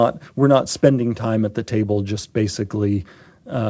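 No technical faults are audible.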